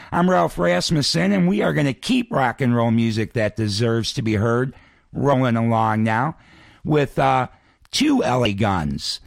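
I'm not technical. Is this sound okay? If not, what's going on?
No. There is damaged data in a compressed stream: part of the file got corrupted, so the player briefly misread it and lost its place. You hear that as a tiny blip at 5.32 s, just after "deserves to be heard", and another at 8.45 s.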